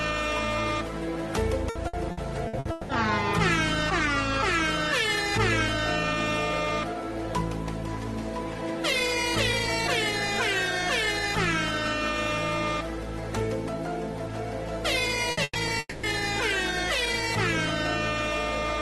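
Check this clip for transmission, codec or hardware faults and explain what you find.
Three kinds of transmission fault are audible, all from packet loss on the network. The audio runs through an Opus-style call codec. Its top end stops near 12 kHz, which fits a low bitrate of roughly 24 kbps.

Repeated packet loss (robotic sound) runs from 1.69 to 2.92 s. Packets went missing six times in that stretch. Each hole was filled by extending the last sound. The longest gap is 180 ms. About 480 ms of real audio is missing, close to 39 percent of the stretch. The result is choppy, with pieces dropped out.

Two bursts of packet loss come close together. The first runs from 15.31 to 15.40 s, the second from 15.43 to 15.58 s. In each, several packets in a row failed to arrive. The receiver stretched the last sound and faded it down. You hear a brief held buzz or hiss. The second burst fades to about 20 ms of silence before the audio returns. 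About 60 ms and 120 ms of content are lost.

From 15.79 to 16.06 s the audio cuts out again. The likely cause is a long network dropout. The last sound is carried on as a fading tail. It ends in about 30 ms of silence. Roughly 240 ms of audio never plays. The sound then resumes further along, with that part skipped. It comes right after the two bursts.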